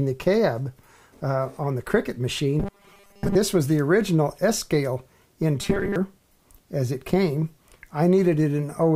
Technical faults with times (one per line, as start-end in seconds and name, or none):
2.60-3.36 robotic sound from repeated short buffers
5.61-5.96 robotic sound from repeated short buffers